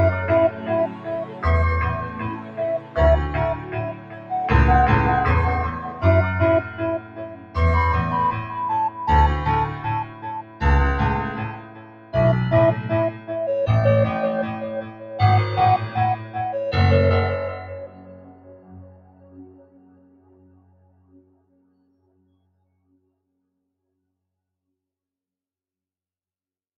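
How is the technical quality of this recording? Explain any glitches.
The quality suffers from a noise suppressor applied to music or sounds, left running across the whole clip. Built for speech, it mistakes steady tones and decaying tails for noise and pulls them down, so levels pump by around 15 dB as onsets pass and held sound sinks.

Sound cut by the noise suppressor is clearest at 0.5–4.31 s, 5.88–7.56 s, 8.9–10.61 s, 11.52–12.14 s, 13.12–13.3 s, 14.82–15.11 s, 16.18–16.35 s and 17.87–22.96 s. There, sustained material dips by about 10 dB (about 8 dB at 16.2 s) and tails get chopped short.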